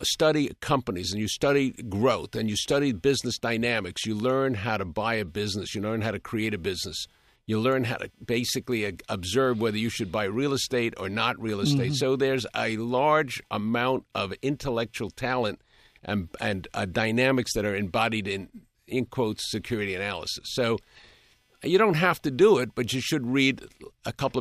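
Computer activity noise runs throughout the speech clip: shifting processor, graphics or mouse load disturbs the audio circuit's shared ground, adding a pulsing noise near 300 Hz, roughly 45 dB below the speech, that rises and falls with the computer's activity rather than with the speech.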